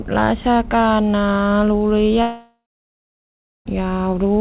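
A speech clip that came over a narrowband call path, with nothing above 4 kHz, which fits G.711 A-law at 64 kbps. From 2.22 s to 3.67 s there's a long network dropout, likely from lost packets. The last sound gets stretched into a buzzy or hissy tail that fades out, then about 1.08 s of near-silence follows, and the speech picks up again with roughly 1.44 s of it simply gone.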